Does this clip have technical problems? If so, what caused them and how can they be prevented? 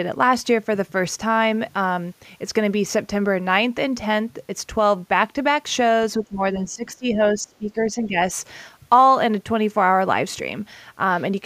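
Yes. Between 6.18 and 8.16 s the speech dips by up to about 15 dB, for roughly 1.5 s. This is speech suppressed in double talk. The likely cause is an echo canceller that confused this talker with loudspeaker echo. Tuning its double-talk detection prevents it.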